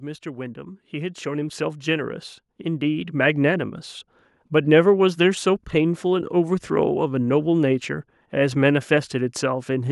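From 0.05 s to 3.7 s there is automatic gain rising: the gain control judged the input too quiet and pushed its gain up by about 12 dB over those few seconds. Speech and background noise swell together, so the room grows steadily louder.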